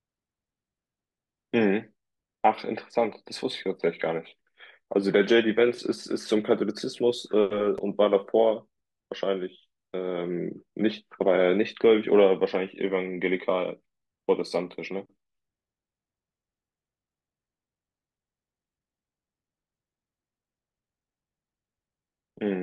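Chunks out of order at 7.78 s: a single short block of about 5.8 ms arrived or was written one chunk late, so it plays just after the block that should have followed it. No audio is missing, but the two pieces are swapped, leaving three abrupt joins where the waveform jumps. In this speech the swap lasts only about 11 ms, so it comes across as a brief smeared flicker.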